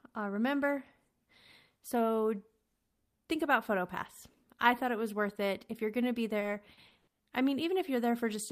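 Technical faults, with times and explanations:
6.39–7.21 s, repeated packet loss (robotic sound): right after "you're going to be", five dropouts, the longest 100 ms, are each patched by stretching the preceding sound, covering about 280 ms, a third of the stretch, so the speech turns choppy.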